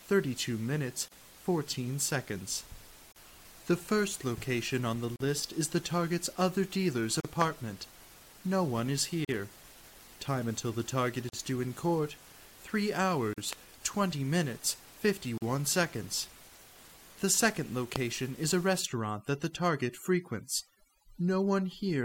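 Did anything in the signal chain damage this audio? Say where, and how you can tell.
Yes, at the codec or file-assembly stage. A gap at a join of encoded pieces opens every 2.0 s, at 1.08, 3.12, 5.16, 7.20, 9.25, 11.29, 13.33 and 15.38 s. The first is 34 ms and the rest are 43 ms. The one at 5.16 s falls between "first location on the" and "is the target's other", and the one at 9.25 s comes right after "one is". Each segment was encoded separately, and its start-up delay and end padding were left in. A network dropout would differ: it would be irregular and would lose material. Here the spacing is exact and the sound resumes exactly where it stopped.

There are three loud pops, at 7.42, 13.53 and 17.96 s. The last comes just before "is a". They peak roughly 15 to 20 dB above the speech and sit on top of it, with the speech continuing underneath. That separates them from the join gaps, which cut a hole in the sound rather than adding energy. 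A single sharp transient with no pattern likely points to the analogue wiring: a plug, switch or static discharge putting a voltage spike into the line.

From 18.79 s to the end there is overdone noise removal in the call-processing stage. The background drops and breaks up into twinkling specks. Before this point the room noise sits steadily about 23 dB below the speech. That contrast shows a suppressor gating bands that fall near its noise estimate, taking quiet speech detail with them. A low-bitrate codec would muddy the whole clip, not just this final stretch.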